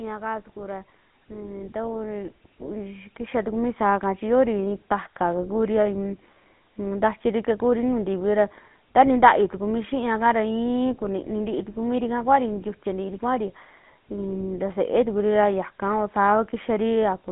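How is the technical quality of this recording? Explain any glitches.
Technical quality is limited by one codec fault present for the whole clip. GSM full-rate codec, throughout: the speech is resynthesised from a vocal-tract model driven by sparse, regularly spaced pulses, giving a plainly audible buzzy, gravelly roughness. The band runs only from 150 Hz to 3.6 kHz, consistent with a 13 kbps phone channel.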